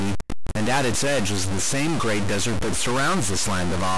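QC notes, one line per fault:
throughout, stuck bit: the speech carries a harsh, buzzy distortion from start to finish, and the gaps between phrases are filled with a gritty noise floor instead of falling silent. This is likely one converter or data bit held at a fixed value, so roughly half the samples are pushed off by a step of around -20 dBFS. Because that bit also flips with the sign of quiet samples, even the pauses become audible noise.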